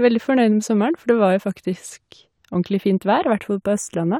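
Throughout the recording, the channels drift apart: the left and right sides run on clocks that differ by a few tens of parts per million, so their offset creeps to a fraction of a millisecond. Heard in mono, the resulting comb notches sweep slowly, giving a slow flanging.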